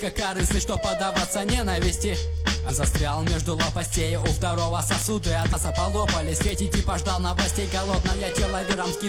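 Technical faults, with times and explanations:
0.16–8.93 s, word clock ticks: an unlocked receiver clock drifting about 100 ppm slips one sample roughly every 0.2 s, giving some fifty sharp, uneven ticks.
2.65 s, 5.48 s and 8.69 s, compressed frames skipped: the audio jumps ahead about 200, 150 and 200 ms, which fits three or four lost 46 ms frames.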